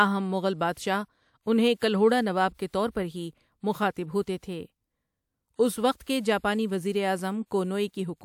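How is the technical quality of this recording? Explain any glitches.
The recording carries one recurring codec flaw, pre-echo, heard four times: 0.73 to 0.77 s, 2.54 to 2.59 s after "انہیں کلہوڑا نواب" and before "کے طور پر ہی", 4.37 to 4.43 s after "پر ہی مخاطب ہوتے", and 6.03 to 6.07 s between "اُس وقت" and "کے جاپانی". Each time, a short hiss of 40 to 57 ms leads into a sharp attack, which lands softened. The codec spread its coarse, loud-sized quantisation noise across the whole block, including the quiet moment before the onset. Unlike reverb or an echo, the smear comes before the attack, not after it.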